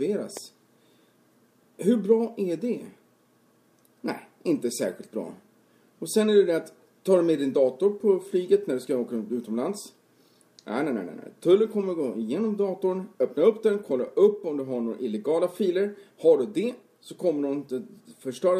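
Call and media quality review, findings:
Loud pop, 0.37–0.39 s: single sharp transient, peaking a few dB above surrounding audio, which continues underneath. Waveform: abrupt spike. Spectrogram: thin full-band vertical line. Likely a voltage step from plug, switch, static or driver glitch entering the chain.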